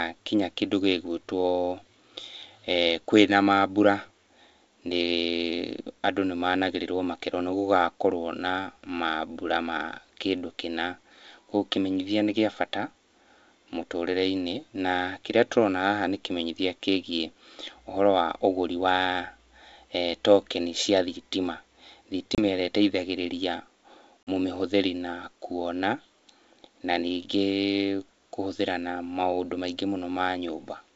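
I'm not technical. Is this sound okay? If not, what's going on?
No, not quite. There are two short dropouts from packet loss on an ADPCM call. At 22.35 to 22.42 s the speech cuts to silence for about 30 ms, and at 24.23 to 24.28 s it happens again for about 40 ms, just before "mũmĩhũthĩri na kuona". Each time a few packets went missing. The decoder predicts each sample from the ones before it, so it comes back slightly off, with a quick click or roughness that settles within a few tens of milliseconds.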